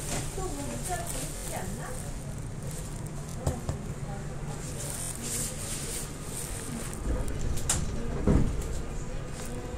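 At 1.37 to 1.44 s, 3.30 to 3.34 s, 5.02 to 5.11 s and 6.53 to 6.55 s the playback shows a repeated buffer. New audio arrived late, so the device replayed its last block of about 23 ms, which fits a 1024-sample buffer. That block sounds two to five times in a row, with a hard join at each repeat, giving a short stutter. Each event drops roughly 20 to 100 ms of the sound.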